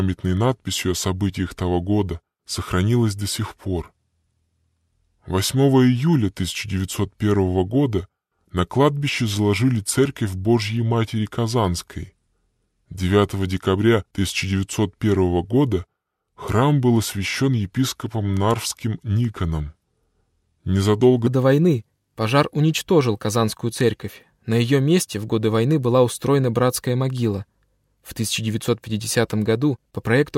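From the start to 21.27 s the audio runs as a section at the wrong speed, slowed to 0.823 times its proper rate, so everything is stretched and drops by roughly three semitones, sounding heavy and sluggish. At 21.27 s the speed and pitch jump back up together. The likely cause is the section being played or resampled against a mismatched clock, which changes timing and pitch at once rather than separately.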